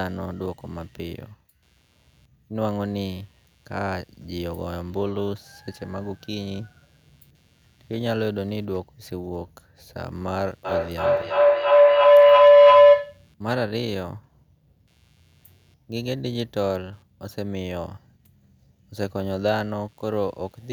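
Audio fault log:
throughout computer activity noise. A faint buzz pulses around 100 times a second, well below the speech. Processor or mouse load is disturbing the audio circuit's shared ground.
10.65–13.29 s feedback howl. A tone near 500 Hz builds to about 15 dB above the speech, pulsing roughly every third of a second. Two devices are looping sound back and gaining level.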